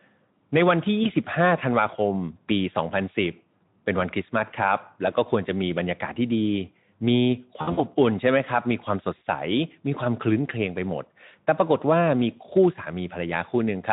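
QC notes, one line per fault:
1.03–1.10 s, VoIP packet loss concealed by the speech codec: about 20 ms of audio, which fits a single lost frame, is filled by the Speex decoder stretching its last pitch and filter. The spectrogram shows briefly frozen, smeared harmonics, and the waveform shows a smooth, flattened envelope patch.
7.61–7.81 s, VoIP packet loss concealed by the speech codec: about 120 ms is lost in bursts scattered over roughly 160 ms, with the longest run at 60 ms. The extrapolated sound fades as the gain drops frame by frame. The sound stays weak just after the losses because each new frame builds on the concealed ones. Horizontal streaks fade out on the spectrogram, and the waveform shows a dipped envelope.
9.17–9.22 s, VoIP packet loss concealed by the speech codec: about 40 ms, consistent with two lost frames, turns into a short smear. The spectrogram shows a brief patch of flattened harmonics, and the waveform shows an amplitude sag.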